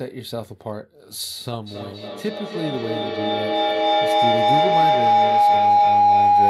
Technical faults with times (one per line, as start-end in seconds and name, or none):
1.66-6.49 feedback howl